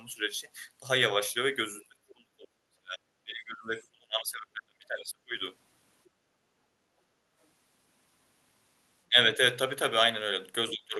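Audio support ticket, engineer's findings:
Speech dropping out in chunks while the far end talks, at 1.88–3.0 s and 3.24–5.38 s (down roughly 30 dB), plus brief dips at 9.09–9.17 s and 10.72–10.96 s. Likely speech suppressed in double talk: the echo canceller mistakes near-end speech for loudspeaker echo and ducks both.

Room tone pumping down during loudspeaker playback, 6.08–6.96 s (about 7 dB) and 7.13–7.32 s (about 6 dB), recovering after. Background gated by the echo canceller: the suppressor clamps the mic while it detects echo, then releases. Top end stops near 12 kHz, consistent with Opus on the call path.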